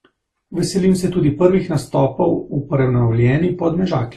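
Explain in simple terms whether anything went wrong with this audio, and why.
Throughout the speech, layered compression artefacts and nothing above 12 kHz point to transcoding between lossy codecs, likely re-encoding through several formats in turn.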